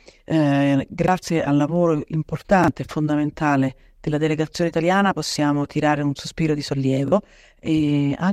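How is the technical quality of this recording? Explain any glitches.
The speech has four repeated-buffer glitches, at 1.04, 2.64, 5.32 and 7.08 s. At each, a 40 ms piece plays twice, which fits a 40 ms playback buffer. New audio arrived late, so the device replayed its last block and about 40 ms of real audio was lost. Each is a brief stutter with a hard join. A waveform shows the same 40 ms shape twice with a step at the seam. A spectrogram shows a duplicated slice and a thin vertical line at the join.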